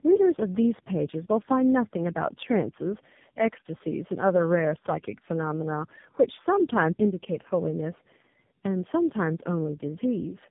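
From start to finish the speech sounds rough, muffled and warbly, with nothing above 3.8 kHz, and the roughness goes beyond what a single phone codec would leave. This is tandem speech coding. The call appears to have been decoded and re-encoded at each network border, so every coder worked on the already damaged output of the one before. The layered artefacts point to about three low-rate speech coders in a row, consistent with GSM full rate followed by two AMR-NB stages.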